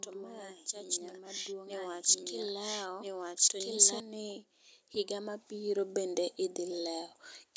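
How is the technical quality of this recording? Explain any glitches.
There are two problems here: a doubled track at the start and a couple of level swells. Doubled audio track, from the start to 4.0 s: a second full-band copy runs about a second and a half behind at roughly the same level, then cuts off abruptly. It's likely from an edit or a slower second capture path. Automatic gain rising, at 0.69 to 1.6 s and 4.92 to 6.23 s: the gain control decided the input was too quiet and pushed it up by about 4 dB and then about 6 dB, so voice and background swell together. The band tops out at 8 kHz, which fits ordinary call microphone processing.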